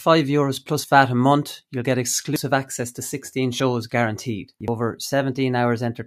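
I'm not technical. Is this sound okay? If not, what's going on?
No. The speech skips forward three times, at 2.36 s, 3.6 s and 4.68 s. Each skip is a small jump, as if a sliver of the recording were cut out and the ends pushed together. The first and third lose roughly a fourteenth of a second each, the middle one a bit less. The likely cause is a dropped buffer (overrun): the recording software fell behind, and the hardware overwrote audio before it was saved.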